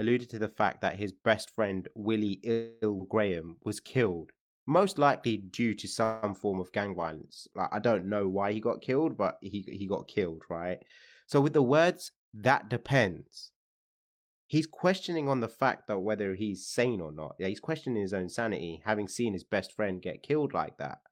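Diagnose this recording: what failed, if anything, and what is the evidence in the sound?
Two call audio freezes, one at 2.51 to 2.84 s and another at 6.04 to 6.25 s. In each, the last bit of sound is stretched into a fading buzz or hiss for about 305 ms and then 189 ms, and the speech picks up exactly where it left off, with nothing lost. That points to the network stage: packets likely stalled in transit, the jitter buffer ran dry, and the receiver papered over the wait. Each freeze adds that much delay.

There's a skip ahead at 2.98 to 3.01 s, right after the first freeze. Playback lurches forward with only a tiny joining gap, and roughly a fifth of a second of speech is gone. This is a chunk of audio dropped in transit or by an overflowing jitter buffer, so the two sides of the cut butt together almost directly.

Next comes a jitter buffer slow-down from 3.34 to 5.64 s. The speech plays at about 92% speed with the pitch unchanged, and sounds come out drawn out. 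The receiver was repeating single pitch periods over and over to rebuild its reserve, adding 186 ms in total. It's a buffer-management move, most likely a reaction to the underruns just before.

Finally, there are two jitter buffer speed-ups, at 11.57 to 12.74 s and 18.96 to 19.43 s. The first runs at about 107% and trims around a tenth of a second. The second is quicker at 110% and takes out around 50 ms. Pitch holds steady, but delivery sounds hurried. The buffer had more audio queued than it wanted and was snipping out short pitch-period pieces to bring latency back down.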